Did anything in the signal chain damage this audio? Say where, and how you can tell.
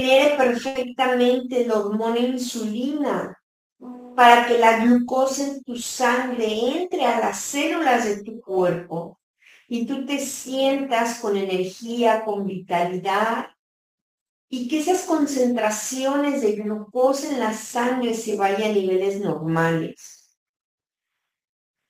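Yes. At the network stage, a short stall from a late packet holds the sound from 0.67 to 0.77 s. A packet missed its playout time, the jitter buffer ran dry, and the receiver stretched the last sound for 80 ms until the packet arrived, then resumed from the same point. Nothing is lost, but playback slips 80 ms later. On a spectrogram the harmonics run flat for that span. The waveform shows repeated, near-identical cycles.

Later, a jitter buffer speed-up runs from 7.59 to 8.95 s. The buffer held more than its target. To trim the excess, the receiver cut short pitch-period slices many times in a row, about 50 ms in all, so playback runs at 103% with the pitch unchanged. The spectrogram keeps the same harmonic spacing but compresses the time axis. The waveform shows small splice points between whole cycles.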